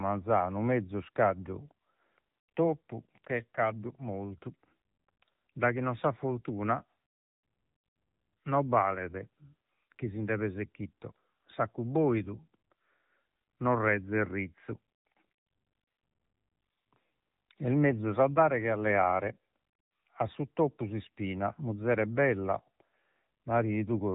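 Speech heard through an AMR narrowband mobile codec throughout: nothing above 3.8 kHz, plus a buzzy, synthetic vocal texture that a plain low-pass filter wouldn't add, which fits roughly 8 kbps.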